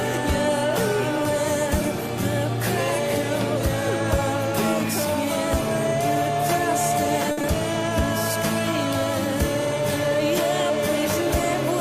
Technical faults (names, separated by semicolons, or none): short stall from a late packet; short concealed packet loss